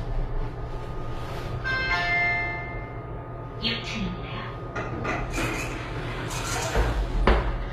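Throughout, the treble sounds bright but gritty and metallic, with damage plainly audible, likely from HE-AAC compression at a low bitrate near 24 kbps. The upper bands are rebuilt from copied lower bands, so harmonics misalign; a spectrogram shows blocky, repeated high-frequency texture, cut off above 14.9 kHz.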